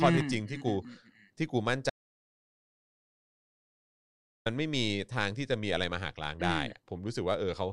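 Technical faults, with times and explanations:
1.90 to 4.46 s, audio dropout to silence. The speech stops abruptly mid-flow and returns just as suddenly about 2.56 s later. The gap is true silence, with no room tone or background left underneath. That points to the input being lost rather than the talker pausing. The likely cause is a disconnected device, a failed link or a stray mute, while recording carried on writing silence. Whatever was spoken during the gap is gone.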